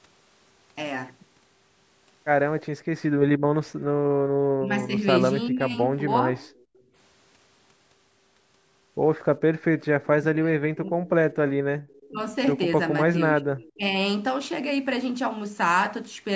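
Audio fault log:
3.44–4.30 s and 6.72–6.94 s, background gated by the echo canceller: room sound ducks by about 15 and about 17 dB respectively, briefly, while the canceller clamps the microphone against loudspeaker output.
4.58–6.25 s and 10.07–13.83 s, speech suppressed in double talk: the talker dips in pieces, by roughly 15 then 25 dB, likely the canceller attenuating both sides during overlap.
6.39–6.82 s, 9.81–12.07 s and 13.62–13.72 s, echo leak: a faint copy trails the speech by 399 ms, around 30 dB down, likely residual loudspeaker pickup the canceller failed to remove.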